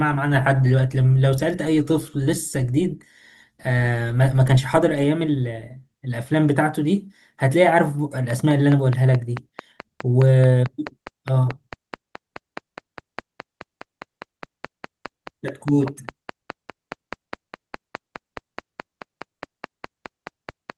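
A train of clicks runs from 8.30 s to 20.71 s through this speech recording: roughly seventy near-identical pulses at a steady 4.76 per second, about 10 dB above the signal, ticking through pauses as well, most likely interference from nearby equipment or a faulty connection, beneath which the light Opus voice compression stays faint.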